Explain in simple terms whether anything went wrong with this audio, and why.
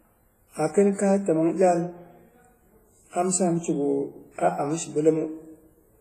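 Something did go wrong, and it lasts the whole clip. The speech sounds washy and ringing, as if each sound leaves a smear behind it. A thin hiss rises and falls along with the talking. Nothing is heard above about 15.4 kHz, so the top is missing. The likely cause is heavy WMA compression. That codec stores sound in chunks. When it is squeezed hard, it blurs each chunk and drops quiet detail.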